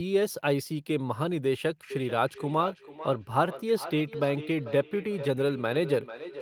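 Speech, with feedback echo between two devices from 1.9 s to the end. A second device on the same call replays the audio into a nearby microphone, so the sound returns roughly every 0.4 s, peaking about 12 dB below the direct speech.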